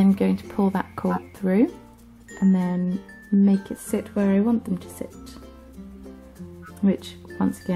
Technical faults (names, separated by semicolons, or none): corrupt frame decoded